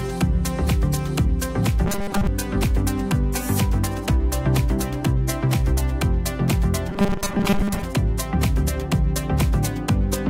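From 1.86 to 2.27 s and again from 6.89 to 7.83 s, robotic sound from repeated short buffers turns the audio into a rigid 200 Hz metallic buzz, likely from most of the signal being replaced by repeats of a roughly 5 ms chunk. Unlike dropouts, nothing falls silent.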